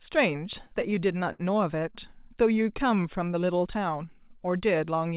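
From 0.52 to 1.41 s the speech stutters with repeated stalls: the jitter buffer ran dry a dozen times, each gap bridged by stretching the last sound, up to 64 ms. Unlike a slow-down, it halts in jerks rather than dragging evenly. Between 2.63 and 3.3 s a jitter buffer slow-down repeats single pitch periods, adding 70 ms, so speech runs at 90% speed with unchanged pitch, drawn-out rather than broken. Throughout, nothing reaches above 4 kHz, which fits a G.711 telephone-band call path.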